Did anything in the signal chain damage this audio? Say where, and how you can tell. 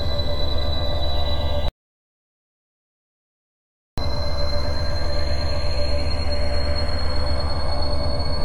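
Yes: an audio dropout to silence from 1.68 to 3.98 s cuts the music to silence for 2.3 s, likely a lost input link.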